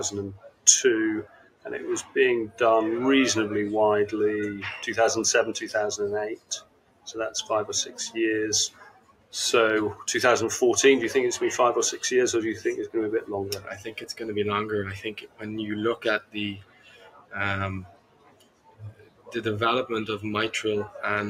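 A speech-tuned noise suppressor is running on non-speech sound, swinging its gain by about 15 dB. Unlike a gate, it cuts by steadiness rather than level, so onsets survive while held parts sink. The sound cut by the noise suppressor drops up to about 17 dB at 0.35–0.66, 1.24–1.67, 6.33–7.1, 8.69–9.34, 13.59–14.22, 15.06–15.43, 15.96–17.35 and 17.84–19.38 s, thinning sustains and truncating decays.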